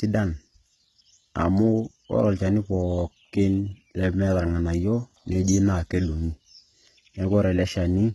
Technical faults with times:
0.00-8.14 HE-AAC compression

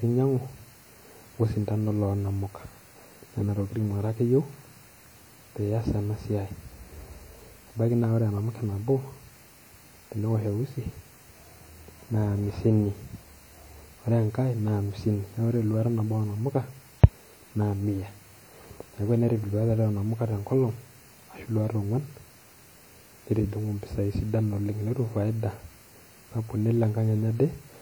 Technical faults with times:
0.00-27.81 WMA compression

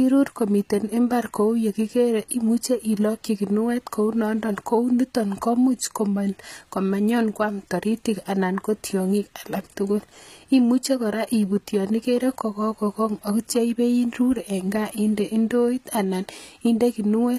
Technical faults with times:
0.00-17.38 HE-AAC compression

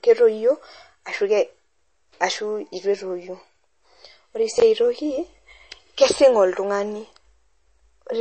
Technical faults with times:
0.00-8.21 MP3 compression
4.58-4.62 chunks out of order

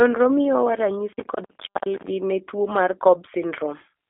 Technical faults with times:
0.00-4.10 G.729 codec
1.13-2.07 processor overload crackle

